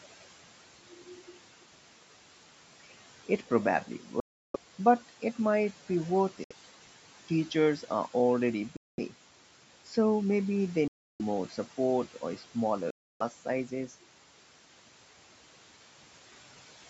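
Around 4.20 to 4.56 s the sound just vanishes, then again at 6.44 to 6.52, 8.77 to 8.99, 10.88 to 11.21 and 12.90 to 13.22 s. The holes run from about 64 to 341 ms, and the sound picks up further along as if it kept playing. That's likely a Bluetooth dropout, with packets arriving too late for the headphones and getting thrown away.

Between 12.14 and 12.55 s the noise suppressor cuts into the speech, mistaking bits of it for background and pulling them down by about 9 dB. Roughly a tenth of a second in total comes out swallowed and faint.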